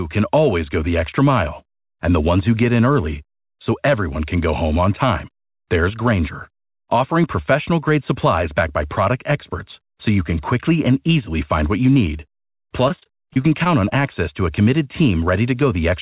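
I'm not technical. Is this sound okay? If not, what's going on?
No. From about 12.88 to 13.93 s there's repeated packet loss (robotic sound): the call kept dropping tiny bits of audio, each under 25 ms, and patching each hole by stretching the last sound. That makes it choppy, with pieces missing. The phone-like dullness comes from the normal call line.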